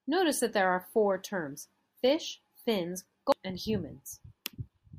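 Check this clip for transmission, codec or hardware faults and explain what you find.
One codec fault turns up. At 3.32 s, right after "four terms fish fins", compressed frames are skipped: whole chunks the decoder never played, about half a second, which fits around seven 92.9 ms frames. The speech jumps forward at the join.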